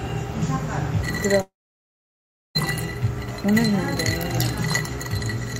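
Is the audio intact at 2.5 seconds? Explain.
No. At 2.5 seconds the sound is gone. From 1.41 s a brief fading buzz gives way to about a second of silence until 2.57 s, when audio resumes with about 1.1 s missing. This is a long network dropout, likely from packets that never arrived.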